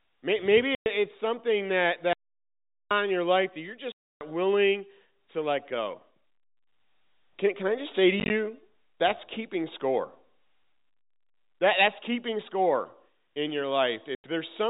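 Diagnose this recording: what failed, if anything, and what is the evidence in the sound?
Packet loss filled with silence at 0.75–0.86, 3.92–4.21, 8.2–8.3 (scattered short holes) and 14.15–14.24 s. Network packets vanished and the receiver inserted silence. Hard-edged gaps fit 10 ms packets.

Audio dropout to silence at 2.13–2.91 s. The speech cuts to 0.78 s of silence with no room tone, likely because the capture input was lost while recording continued.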